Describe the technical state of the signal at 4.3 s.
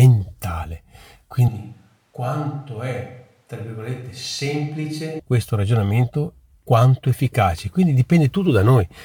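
At 4.3 s, a switch to a distant microphone runs from 1.48 to 5.19 s. Speech turns roomy, hollow, thinner and about 10 dB quieter. The close microphone likely dropped out.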